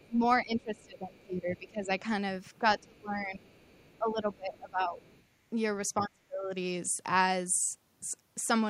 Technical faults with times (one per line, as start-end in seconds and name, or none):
0.00-2.03 speech suppressed in double talk
0.79-0.85 other side's voice leaking through
2.59-3.53 speech suppressed in double talk
2.97-3.01 other side's voice leaking through
3.51-3.98 other side's voice leaking through
3.98-5.01 speech suppressed in double talk
5.04-5.23 other side's voice leaking through
6.01-6.55 speech suppressed in double talk